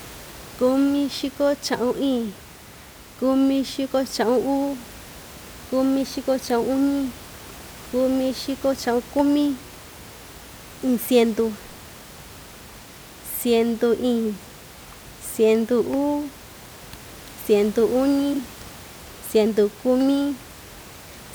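Frames out of order at 7.82 to 7.92 s and again at 18.33 to 18.39 s: two adjacent runs of coded frames reached the decoder swapped, so each short stretch of speech plays with its two halves exchanged. The first swap involves longer blocks, consistent with about 48 ms pairs of frames, and the second with single blocks of about 24 ms. Each sounds like a brief garbled flutter, and no time is lost. Room noise sits about 21 dB below the speech.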